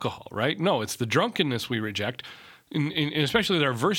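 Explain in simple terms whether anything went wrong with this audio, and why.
Nothing went wrong here: the recording stays steady throughout, with no technical problems to be heard at any point.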